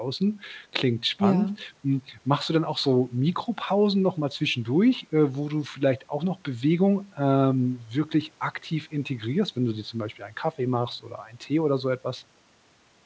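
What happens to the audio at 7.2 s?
Nothing goes wrong at 7.2 s: the speech carries straight through with no fault, and the call path's wideband coding, with nothing above 8 kHz, sounds the same there as it does on either side.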